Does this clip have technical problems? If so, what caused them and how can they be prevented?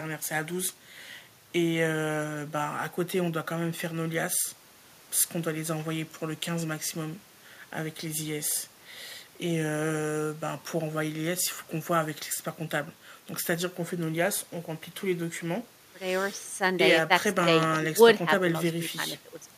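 No, the speech signal shows no technical faults, so there is nothing here to trace to a cause or to prevent.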